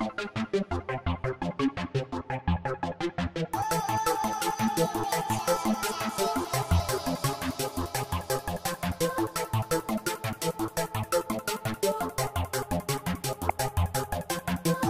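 Near the end, at 13.49 s, a brief chirp-like burst cuts through the audio. It is a corrupt frame decoded. Damaged bits in about two compressed frames were played anyway, placing strong energy at wrong frequencies. It peaks around -10 dBFS.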